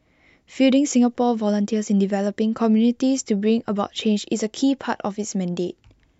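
Nothing goes wrong anywhere in this speech recording; no technical faults turn up at any point.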